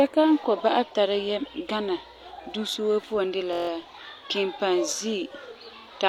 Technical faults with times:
3.53-3.69 system hang loop

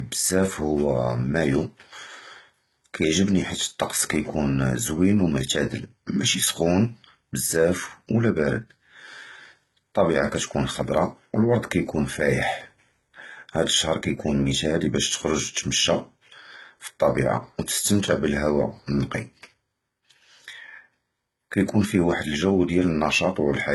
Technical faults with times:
0.00-23.75 low-bitrate audio saved at a high bitrate

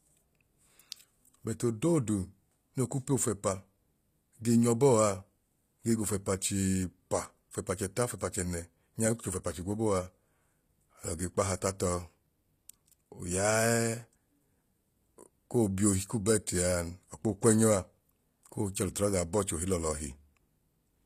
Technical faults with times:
0.00-21.06 HE-AAC compression

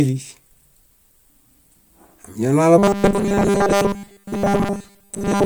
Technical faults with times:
2.78-5.45 robotic sound from repeated short buffers

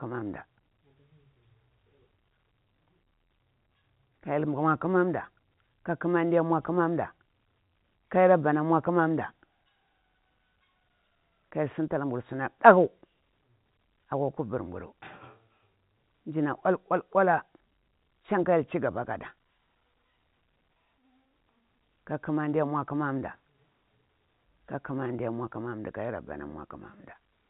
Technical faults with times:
none

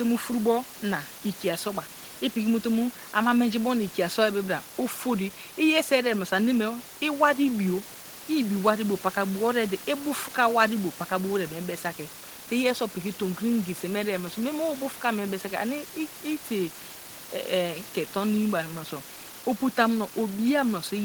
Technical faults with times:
none

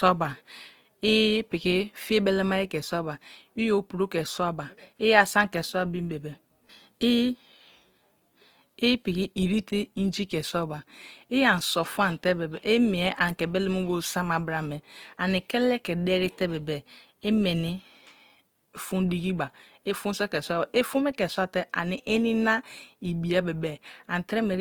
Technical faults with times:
0.00-24.61 Opus compression

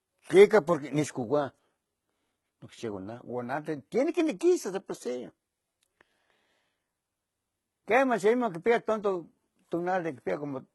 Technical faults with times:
0.00-10.75 HE-AAC compression

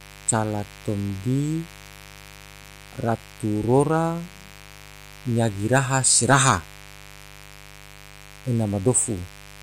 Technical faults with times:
0.00-9.63 mains buzz

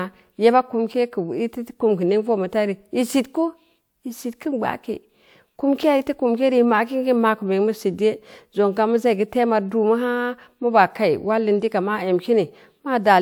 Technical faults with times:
none

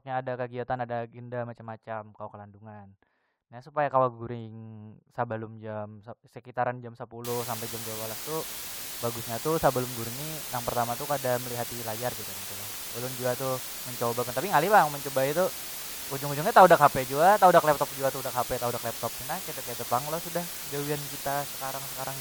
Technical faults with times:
7.25-22.21 low bit depth with dither

